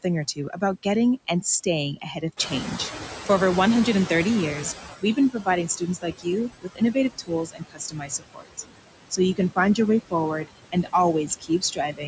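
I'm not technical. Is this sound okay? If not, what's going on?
No. A noise suppressor is working on this speech, and it leaves noise suppressor artifacts all the way through. It pushes the background noise down hard, so it sinks between the words and rises under them.

The suppressor also clips bits of the speech itself, treating them as noise. That's speech cut by the noise suppressor. Quiet sounds and word endings go faint or swallowed at 1.96–2.39 s just after "getting and staying", 5.0–5.48 s, 5.68–6.27 s, 6.62–8.6 s (the longest stretch, about a second of it dipping), 10.72–10.94 s just after "find your way forward", and from 11.27 s to the end.

Then there's the noise suppressor catching up. The room noise gets noticeably louder at around 2.5 s, and the suppressor is slow to notice. From 2.36 to 4.96 s, roughly two and a half seconds, the extra noise comes through more clearly before gradually being turned down again.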